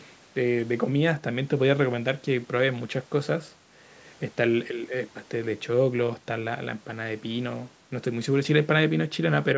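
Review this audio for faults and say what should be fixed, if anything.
Nothing here needs fixing; no faults are present.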